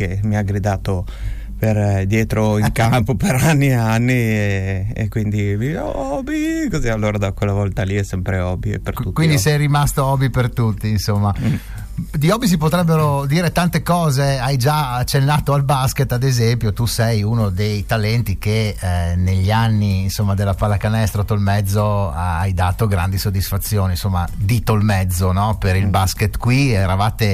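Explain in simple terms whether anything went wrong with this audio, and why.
An electrical switching spike shows up at 24.81 s: a sharp snap lasting only a few thousandths of a second, sitting on top of the sound rather than replacing it. It was likely caused by a nearby switch, motor or small static discharge throwing off a tiny electrical arc, which the audio cable or equipment picked up as a burst of interference. It isn't very loud, just a brief tick.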